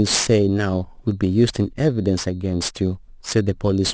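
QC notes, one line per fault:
Throughout, aliasing: sibilants sound gritty and metallic because energy above 8 kHz folds back below it as unrelated tones, roughly 15 dB under the speech. This fits a drop from 24 kHz to 16 kHz sampling without an anti-alias filter.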